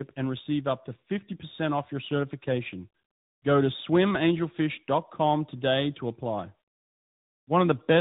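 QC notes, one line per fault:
throughout: tandem speech coding. Speech sounds rough, noisy, muffled and warbly, with nothing above 3.8 kHz. Two speech codecs in a row, pointing to a delta-modulation coder and then a model-based one near 10 kbit/s, the second re-coding the first's already degraded output.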